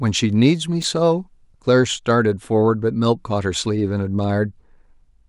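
At 0.82 to 0.84 s there are chunks out of order: one 10 ms chunk of speech arrives a single chunk late and plays after the chunk meant to follow it. Nothing is missing, but the swapped pair leaves three hard joins, heard as a brief jumbled flicker.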